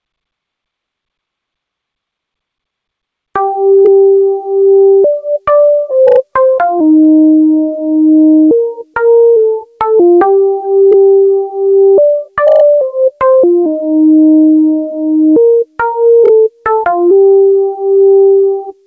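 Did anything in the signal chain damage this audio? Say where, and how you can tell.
Yes. Gain pumping runs through the whole clip, with the level pulled down under every loud event by around 5 dB. The likely cause is input gain set far too high at the analogue or converter stage, with a fast limiter in the call processing reining it in. On the waveform, the envelope looks flattened. The spectrum stops at 8 kHz, which fits the G.722 call codec.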